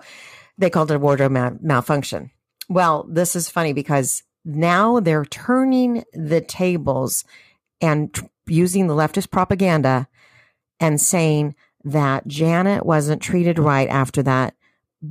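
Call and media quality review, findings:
No audible faults in the speech on review; no defects to log against any component.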